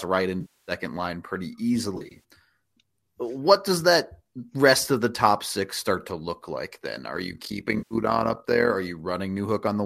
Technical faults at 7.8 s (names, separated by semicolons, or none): overlap-add ripple; AAC frame loss with concealment